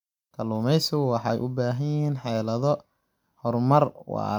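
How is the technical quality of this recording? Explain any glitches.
The recording is technically sound, with nothing in the signal that counts as a glitch.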